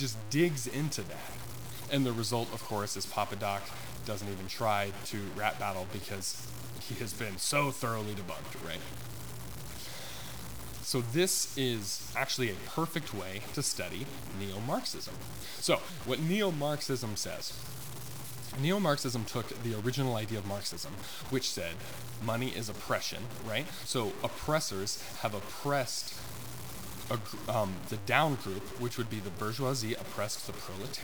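The speech is grainy from start to finish, a harsh distortion riding on every syllable; that's likely low bit depth without dither, truncated to around 6 bits.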